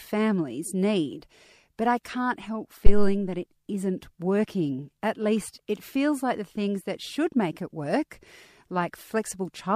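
At 2.86 s, after "but I can't help" and before "that it isn't working", a phantom power thump lands: supply switching on the live input steps through the coupling capacitors, giving a deep thump peaking near -2 dBFS, dying away within about 83 ms, audible until 3.23 s.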